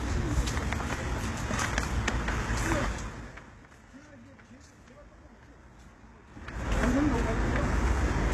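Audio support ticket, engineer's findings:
Gritty, metallic treble throughout, nothing above 12.3 kHz; likely HE-AAC compression at a low bitrate, around 16 kbps. Spectrogram: repeated, smeared high bands above the crossover.

Zipper noise at 2.81–3.69 s, level falling about 25 dB, and at 6.27–6.73 s, rising about 25 dB. Unsmoothed 3 dB gain steps, roughly 10–15 per second. Waveform shows a staircase envelope.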